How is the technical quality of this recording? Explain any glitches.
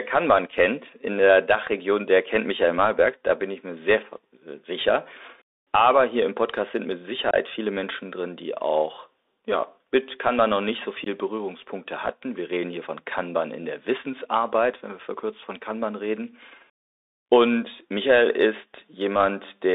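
The recording is narrowband and damaged, with two brief dropouts on top.

The Bluetooth CVSD headset codec runs throughout. Its one-bit slope coding runs on a narrowband link that confines the speech to roughly 300 Hz to 3.7 kHz, consistent with a 64 kbps link, so the speech has a granular hiss beneath it, scratchy sibilants, and distortion where loud high components outpace the adaptive step.

Unconcealed Bluetooth headset packet loss occurs at 7.31 to 7.34 s, right after "sind mit", removing about 26 ms, and at 11.04 to 11.08 s, after "noch nicht so", removing about 19 ms. Several consecutive packets were replaced with silence or an idle pattern, leaving hard-edged holes and a brief quieter recovery.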